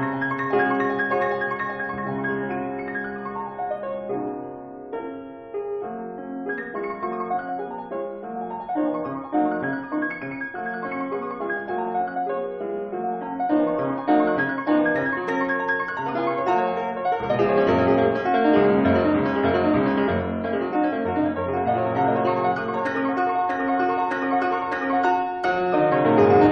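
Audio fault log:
Nothing stood out on listening, and no part of the audio drew attention as a fault.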